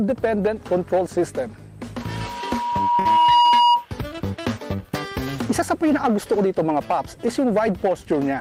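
The audio is hard clipped throughout, driven about 6 dB past full scale. Roughly 7 percent of samples are cut flat, adding crackle on peaks. From 2.02 to 3.86 s a loudspeaker feedback squeal appears. A 959 Hz tone swells over about a second and a half, ending near 10 dB above the audio. The mic was hearing its own loudspeaker. At 2.99 to 3.07 s there is a short stall from a late packet. One sound is held for 58 ms while the receiver waited, then playback resumes with nothing lost.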